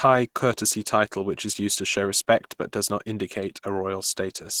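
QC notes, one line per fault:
Throughout: Opus compression. The speech sounds hoarse and somewhat muffled, and its tone turns grainy and noisy. The damage is plainly audible. The likely cause is a low-rate Opus encode in hybrid mode, which fits about 16 kbps. Bandwidth stays full, reaching 23.3 kHz.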